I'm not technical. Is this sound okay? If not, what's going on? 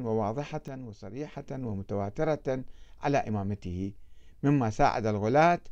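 No, there's a sudden gain jump: from 0.68 to 1.32 s the speech and background abruptly drop quieter together, then snap back, likely a volume setting changed without smoothing.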